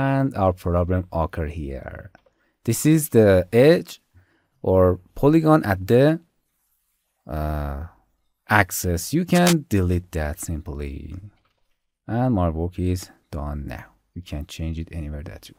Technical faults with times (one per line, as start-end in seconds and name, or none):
9.34-9.53 cable scratch noise